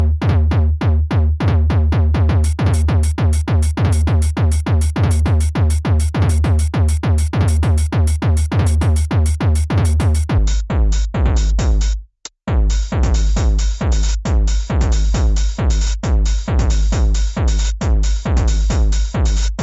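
From the very start up to about 10.38 s, you've got a wrong sample rate problem. Everything runs 1.5 times too fast and sits about 7 semitones high, so the sound comes across hurried and squeaky. That ratio fits audio captured at 16 kHz being played back at 24 kHz with no conversion in between, so speed and pitch climb together. After 10.38 s the rate matches again.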